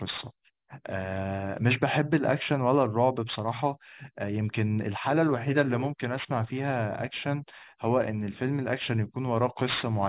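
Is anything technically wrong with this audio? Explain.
Yes. Throughout, aliasing: the audio was downsampled without an anti-alias filter, which points to an 8 kHz rate, so content above 4 kHz folds back, leaving sibilants gritty and metallic, with the folded content roughly 20 dB down.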